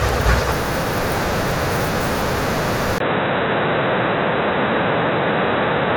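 At 2.98 s the input likely switched to a poorer device. After a 20 ms gap the speech turns dull, with nothing above 3.9 kHz and faint new background noise.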